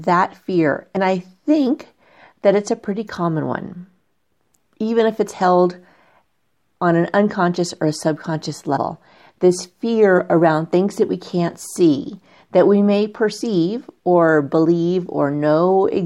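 At 0.95 s, just before "I think that it's", the speech jumps forward by roughly 70 ms, which fits about three 23.2 ms compressed frames skipped. A second skip at 8.76–8.78 s, after "unconscious or a subconscious", drops around 100 ms, and a third at 13.40 s, after "see that we may", loses about 70 ms. The decoder lost or rejected whole frames, so the audio jumps ahead at each join.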